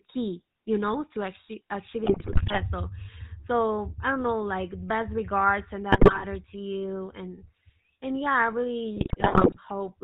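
Speech coded through the GSM full-rate codec, at 13 kbps, has an audible buzzy, gravelly roughness, and a spectrogram shows nothing above 4 kHz. GSM bit errors at 2.04–2.61 s after "you know to achieve", 5.92–6.24 s between "like best regards and" and "to you and and", and 8.96–9.57 s after "and and yeah I" cause squawks and gargling, with smeared spectral frames and level spikes.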